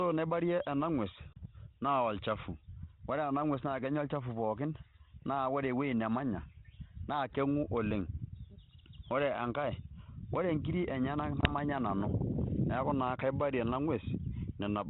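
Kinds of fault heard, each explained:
Packet loss on an ADPCM call: the speech, band-limited below 4 kHz in a way that fits 32 kbit/s G.726, drops into hard-edged silence twice. The first gap, about 30 ms, starts at 1.33 s and the second, about 20 ms, at 11.41 s. Each fits a few lost packets. The decoder's predictor and step size then no longer match the sender's, so the speech returns slightly distorted until it settles near 1.45 s and 11.52 s.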